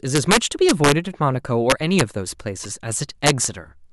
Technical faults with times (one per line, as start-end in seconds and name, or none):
0.15-0.92 integer overflow
1.70-2.01 integer overflow
2.63-2.65 damaged data in a compressed stream
3.26-3.45 integer overflow